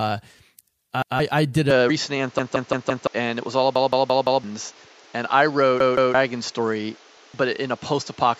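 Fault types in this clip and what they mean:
Repeated buffer: the same 170 ms slice replays one to four extra times, which fits an 8192-sample buffer. The waveform shows identical blocks with hard seams.
Input switched to a poorer device: likely behind the change at 1.7 s. The spectrogram stops at 7.6 kHz over new noise about 30 dB down.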